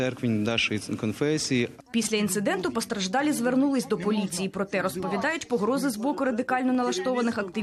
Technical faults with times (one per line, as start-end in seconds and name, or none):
1.37 dropped samples
3.25 dropped samples
6.75 dropped samples